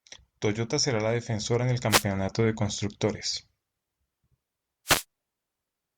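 At 1.89 to 2.04 s, between "la defensora en el" and "de constructores", a wireless microphone noise hit breaks through as a short burst of static. Another follows at 4.85 to 5.04 s. Each time the FM radio link faded and receiver hiss surged.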